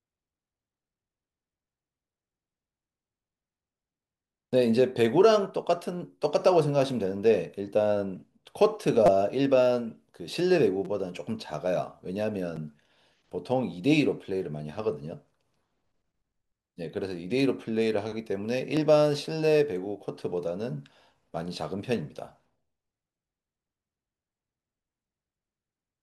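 Repeated buffer stutters at 9.06–9.09, 10.85, 12.56 and 18.77 s: new audio arrived late, so a 5.8 ms chunk replayed up to four times, heard as quick buzzy clicks.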